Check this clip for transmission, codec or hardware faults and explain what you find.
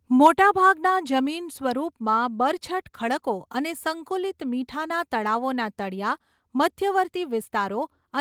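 Two faults appear right at the start, both near a quarter of a second.

From 0.25 to 0.27 s there is microphone overload. The peaks run about 3 dB past the converter's ceiling and a sizeable share of samples are flattened. The likely cause is an input volume set too high. It sounds like a brief harsh crackle, not the smooth squashing a limiter would give.

At 0.27 s the microphone volume steps down. Right after that distorted peak, the speech and the background both fall by about 3 dB together, likely because the call software cut the device's input volume in one step. The drop is a single clean step, not the gradual pumping of automatic gain control.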